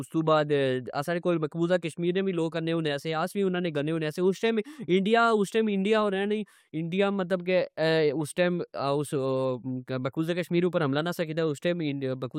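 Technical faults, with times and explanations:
No technical faults found in this speech recording.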